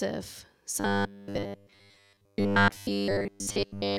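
From 0.8 s to the end, the speech becomes a rigid, metallic buzz at 100 Hz. It loosely follows the words. This is robotic sound from repeated short buffers. Audio likely arrived too seldom, so a 10 ms chunk looped most of the time.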